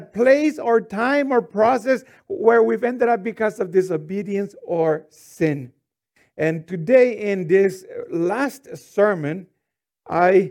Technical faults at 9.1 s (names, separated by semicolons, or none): none